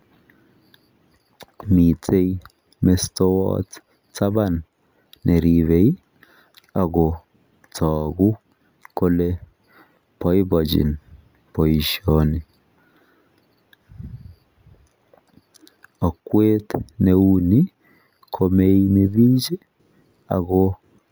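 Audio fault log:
throughout, imaging from sample-and-hold upsampling: the speech appears to have been raised from a 16 kHz rate to 48 kHz by simply repeating each sample, with no interpolation filter to remove what that creates. The mirrored copy of the original spectrum lands between 8 and 16 kHz, about 25 dB below the signal. It sits over the speech as a bright metallic fizz that rises and falls with the voice, and as the pitch rises this lowest copy slides the opposite way.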